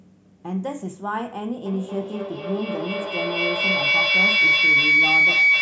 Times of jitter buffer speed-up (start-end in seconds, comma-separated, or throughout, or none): none